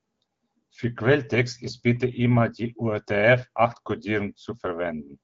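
Nothing technically wrong can be heard in this speech clip. It has passed through the AMR wideband (HD Voice) codec at 12.65 kbit/s, which leaves the speech clear with only light coding texture and nothing above 7.6 kHz.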